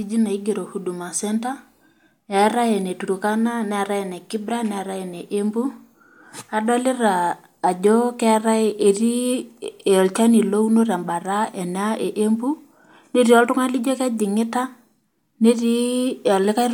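Speech recording with no audible technical faults.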